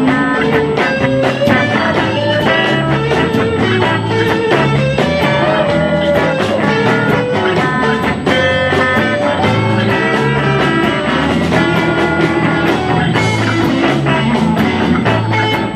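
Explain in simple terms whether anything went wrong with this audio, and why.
A steady, high-pitched whistle at 8 kHz runs underneath the sound from start to finish, well below the main sound in level. This is USB whine: a USB connection draws power in tiny regular bursts, 8,000 times a second, and that rhythm leaks into the audio through the power or ground wiring. Mains hum sits low, at 50 or 60 Hz. This tone is high and fixed in pitch at 8 kHz, the USB rate.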